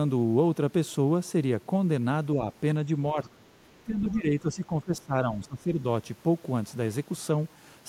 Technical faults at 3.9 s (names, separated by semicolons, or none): speech suppressed in double talk